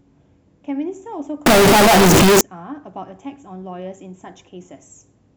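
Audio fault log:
1.46–2.41 s, float read as integer: the speech abruptly becomes a very loud, harsh, near-square buzz at an almost fixed, high level, with background noise as loud as speech, though pitch stays traceable. Likely 32-bit float samples read as 32-bit integers, so sign and exponent bits set each value.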